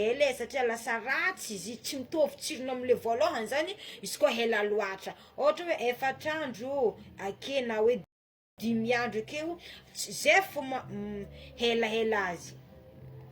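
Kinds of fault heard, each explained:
Rebuffering stall: the player drained its store of downloaded audio faster than new data arrived, so playback halted and waited for the stream to catch up. In this speech clip the sound drops to silence at 8.04 s and picks up again at 8.58 s exactly where it left off, with nothing skipped or repeated. The gap adds about 0.54 s of dead air to the timeline and interrupts the flow of speech.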